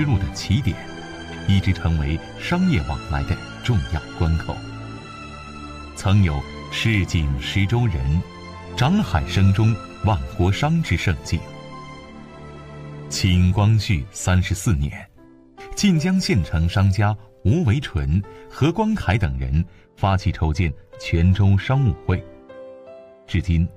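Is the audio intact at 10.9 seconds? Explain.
Yes, the audio at 10.9 seconds is intact, with no dropout, click, distortion or other fault there.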